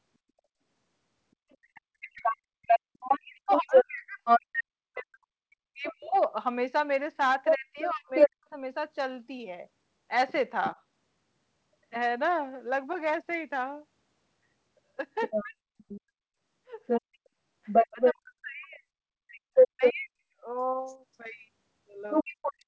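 Other side's voice leaking through begins at 1.5 s and runs to 5.93 s, a second voice roughly 5 dB louder than the talker's. It returns from 7.44 to 8.29 s at around 10 dB above, briefly at 10.64 s to 10.71 s about 10 dB below, and from 15.2 s to the end at about 5 dB above. The likely cause is a loudspeaker feeding the far end back into the microphone, with the echo canceller leaving much of it in place.

Speech suppressed in double talk overlaps these stretches, from 1.59 to 8.52 s, from 15.42 to 20.45 s, and from 22.23 to 22.43 s. The talker's voice dips by as much as roughly 40 dB and drops out in pieces, adding up to about four seconds, a second and a half, and a fifth of a second in the three spans. This is likely the echo canceller, unable to separate the talker from the competing echo, turning the whole signal down. Beneath all of this the band stops at 8 kHz, consistent with G.722 at 64 kbps on the call path.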